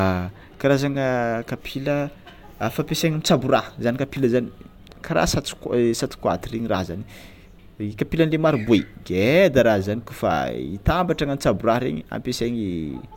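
No technical faults can be heard anywhere in the recording, and the signal stays intact and continuous throughout.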